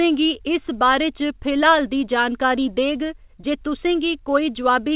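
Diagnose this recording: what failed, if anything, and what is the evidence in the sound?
Nothing stood out on listening to this speech recording, and it came through the call path as expected.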